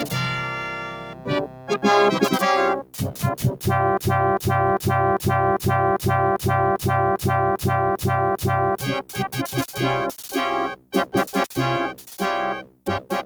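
A noise suppressor made for speech is applied to this sound throughout. It treats steady tones, ambience and decay as noise and pulls them down. Level swings by roughly 10 dB as it grabs and releases. Onsets pass, but sustained parts and tails sink, so the sound pumps and thins.

Specific dips show sound cut by the noise suppressor. The first runs from 0.48 to 1.3 s, dropping by about 10 dB. Next come 1.46 to 1.77 s and 2.82 to 3.18 s, each about 9 dB down. Later dips fall at 9.06 to 9.36 s and 10.7 to 11.14 s, again about 9 dB. The last, 12.62 to 12.87 s, reaches about 10 dB. Each time, held or fading sound is cut short.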